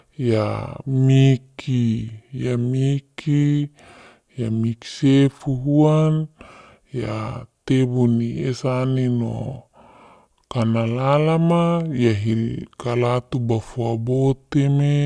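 The audio is played back slower than it was captured, with no rate conversion, a wrong sample rate that fits 32 kHz material run at 22 kHz. Throughout, the speech drags at 0.689 times normal speed and sits 6.45 semitones low, sounding slow, heavy and deepened.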